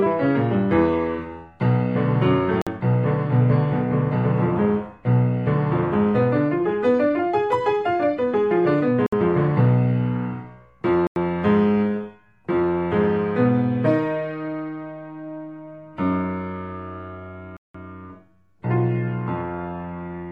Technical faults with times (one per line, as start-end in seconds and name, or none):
2.62-2.67 Bluetooth stall
9.06-9.13 Bluetooth stall
11.07-11.16 Bluetooth stall
17.57-17.75 Bluetooth stall